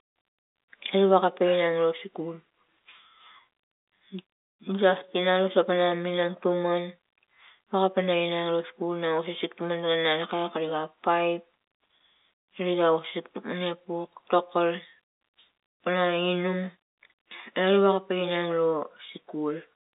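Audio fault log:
No faults are heard in this speech clip. It has come over a G.711 telephone coding path, so the sound sits within a 300 Hz to 3.7 kHz line band with nothing above about 3.8 kHz, and any coding noise is faint at most.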